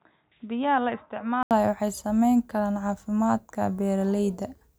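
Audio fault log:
0.0 to 1.51 s, input switched to a poorer device: dull, boxy sound cut off above 3.8 kHz, roughly 10 dB quieter with faint extra hiss, then an 80 ms gap, likely the switch back.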